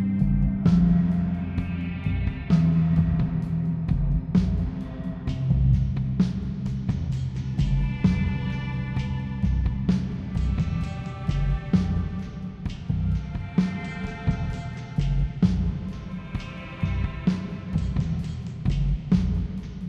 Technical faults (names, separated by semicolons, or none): none